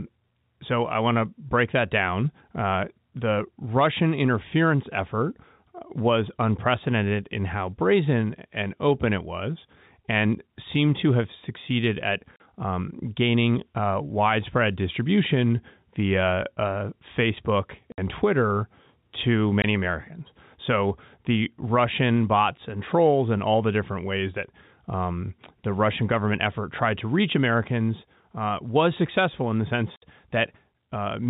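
Short hard-edged dropouts of dead silence cut into the speech at 12.36 to 12.40 s, 17.92 to 17.98 s, 19.62 to 19.64 s and 29.96 to 30.02 s. This is packet loss filled with silence: gaps of 40, 60, 20 and 60 ms, all multiples of 20 ms, which fits 20 ms packets on this G.711 telephone-band line.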